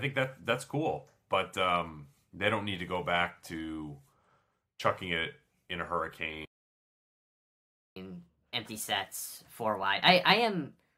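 At 6.45 s the speech halts mid-flow and the output goes silent until 7.96 s, a gap of about 1.51 s. This is a playback stall, most likely the player running out of buffered data or its output thread being blocked. Unlike a brief dropout or packet loss, which leaves a click or a gap of a few milliseconds, this is a single, sustained silence long enough to read as the stream freezing before it picks up again.

From 7.96 s to the end of the clip at 10.96 s, playback runs at 1.25 times normal speed. This is catch-up at higher speed: after the stall, the player resamples its backlog to recover the lost time, so the voice sounds hurried and raised by roughly four semitones. Speed and pitch rise together, which separates it from a pitch-shift fault, where pitch changes while timing stays normal, or from time-stretching, where speed changes while pitch holds. Coming immediately after the silence also marks it as recovery from the stall.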